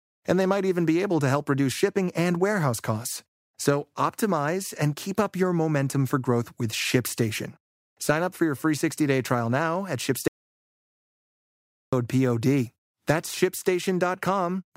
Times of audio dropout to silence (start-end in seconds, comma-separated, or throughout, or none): 10.28-11.93